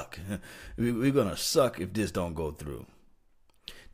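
No technical faults are audible anywhere in the recording.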